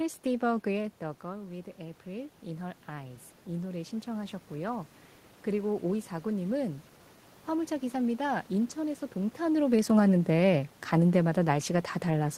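From 1.0 to 4.92 s the speech shows automatic gain rising: after the talker moves back around half a second in, the level drops about 11 dB, and the gain control slowly restores about 6 dB. Unlike a talker simply moving, the room noise swells along with the voice.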